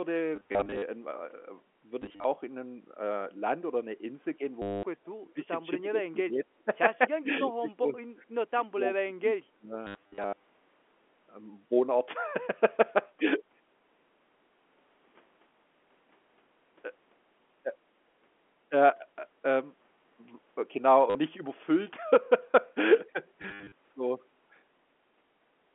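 Packet loss with the last packet repeated appears at 0.36–0.82 s, 2.02–2.24 s and 4.62–4.83 s. In the first two the gaps are scattered, with runs up to 40 ms; the third is one unbroken 210 ms loss. The receiver replays stale audio across each hole. The loops fit 10 ms packets, so the runs buzz at about 100 Hz, like a robotic stutter.

From 5.22 s the speech dips in pieces: 5.22–5.48 s, 5.8–6.42 s, 6.65–6.69 s, 7.22–7.97 s, 8.15–8.21 s, 8.56–8.82 s and 9.04–9.76 s. The drops range from about 10 dB to about 25 dB, deepest at the end. This is likely speech suppressed in double talk, with the echo canceller ducking the talker while the far side speaks.

The repeated-packet stutter returns at 9.87–10.43 s, with runs up to 80 ms. It comes back at 21.1–21.15 s and again at 23.42–23.72 s, where the longest run is 70 ms.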